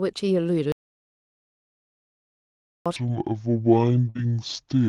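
A short speech recording, carried over a call path whose top end stops around 12 kHz, in keeping with Opus at roughly 32 kbps, has four separate faults. First comes an audio dropout to silence: the input was likely lost, through a disconnected device, broken link or accidental mute, while the recorder kept writing silence. At 0.72 s the sound cuts off dead, with no room tone left behind, and nothing returns until 2.86 s, so about 2.14 s of speech is simply gone. Shortly after, at 2.96 s, a section at the wrong speed begins and runs to the end. The likely cause is the audio being clocked out at the wrong rate, here about 0.6 times the original. Speed and pitch drop together, so the speech becomes slow and heavy, roughly ten semitones lower than it should be. Inside that slowed stretch, a burst of packet loss occurs from 4.09 to 4.23 s. A run of packets failed to arrive in time and about 60 ms of audio never reached the decoder. 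The receiver covered about 54 ms of it by stretching and fading the last sound it had, so a held buzz or dwindling hiss stands in for the missing speech before playback resumes further on. Overlapping it, from 4.17 to 4.20 s, is a short concealed packet loss: a further 20 ms hole, about 12 ms of it patched by extrapolating the preceding signal and crossfading back. It is heard as a brief smear or wobble where a short sound may vanish.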